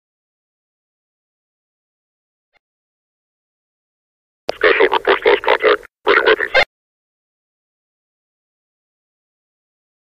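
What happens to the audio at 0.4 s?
At 0.4 s the audio is intact, with no fault to be heard at that moment.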